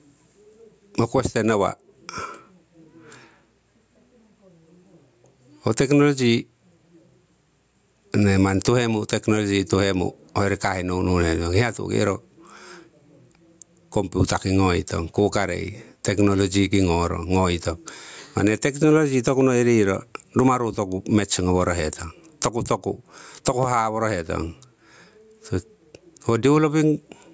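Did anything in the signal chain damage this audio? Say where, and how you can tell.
Yes. The damage is gain pumping, present throughout the speech, and it sits at the converter input stage: the input gain was likely set far too hot for the microphone, so a fast limiter or compressor clamps down on every loud syllable. The gain swings by around 15 dB, which squashes the dynamics and leaves loud and soft passages unnaturally close in level.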